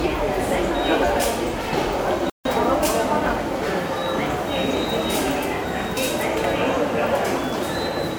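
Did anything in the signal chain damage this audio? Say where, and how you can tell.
Yes. The damage sits at the playback stage. At 2.30 s the sound stops dead in mid-flow. Silence follows until 2.45 s, a gap of about 155 ms, and then the everyday sounds resume. This is a playback stall. The player had nothing to send to the output for that stretch. The likely cause is a buffer that ran dry or a player thread that was blocked. Output fell silent until data flowed again.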